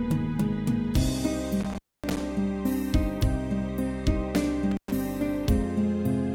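Intermittent contact breaks this audio twice, from about 1.6 to 2.21 s and from 4.71 to 4.92 s. A loose plug or cable briefly opens the signal path, cutting the sound for roughly 0.26 s and then 0.11 s, with crackle as the contact scrapes open and shut and faint hiss in the gap. That crackly, irregular edge sets it apart from a digital dropout, whose gaps start and stop cleanly into plain silence.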